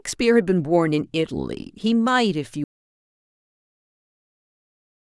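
From 2.64 s the speech cuts off abruptly into total silence with no room tone, lasting to the end: an audio dropout to silence, likely from lost input while recording continued.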